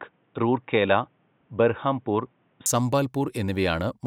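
From the start to 2.66 s, the speech is dull and boxy, with nothing above 3.8 kHz. At 2.66 s it suddenly clears, with no gap and no real level jump. The input likely switched from a poorer device to a better one. Faint background noise sits far below the speech.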